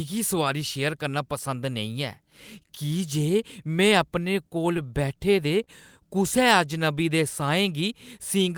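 Speech, with scattered short gaps between 4.49 and 5.69 s, starting just after "में अपने". Around seven brief dropouts, the longest roughly 30 ms, were filled by extending the preceding sound, concealing about 100 ms in total, or roughly 7% of that stretch. Each patch is heard as a small tick, smear or hiccup while the speech stays intelligible. The repairs also lengthen the passage by about 8 ms, consistent with lost or late packets being concealed at the receiver.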